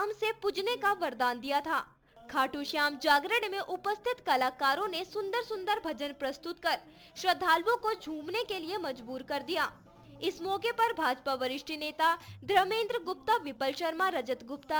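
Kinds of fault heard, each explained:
Sample clock jitter: an unsteady converter clock takes each sample at a slightly wrong instant, by something like several microseconds, and the timing error lands hardest where the waveform moves fastest, leaving a roughness roughly 25 dB below the sound that swells on loud, bright passages and drops away in quiet.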